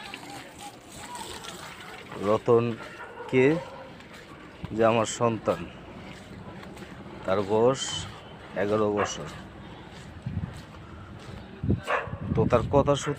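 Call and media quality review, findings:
Call and media quality review found no faults to report.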